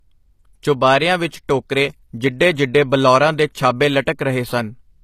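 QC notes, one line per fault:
Throughout: low-bitrate audio saved at a high bitrate. The speech stops dead at 14.9 kHz and keeps a smeared, swirly low-rate texture, likely from an earlier HE-AAC-style encode re-saved as high-rate MP3. Unlike a plain low-bitrate file, the generous final bitrate restores nothing.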